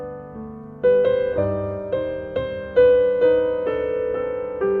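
Nothing in the signal points to a technical fault at any moment; the audio stays intact and continuous throughout.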